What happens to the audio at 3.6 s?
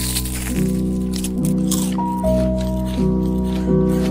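At 3.6 s a faint, regular ticking runs through the sound, part of a series of clock slip clicks from 0.11 to 4.09 s, about seven per second. They likely come from two unsynchronised clocks differing by around 100 ppm, so a single sample slips whenever the error adds up.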